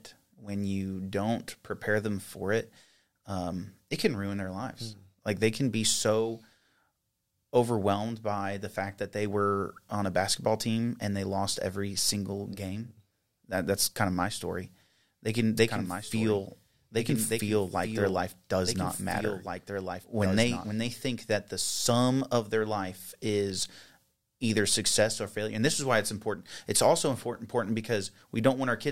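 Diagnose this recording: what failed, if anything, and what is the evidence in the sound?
A doubled audio track runs from 15.57 to 20.71 s, just before "they think that the". A dry, full-band copy trails by about one and a half seconds, about 5 dB down. It starts and stops abruptly. Likely cause: an edit holding two out-of-step copies.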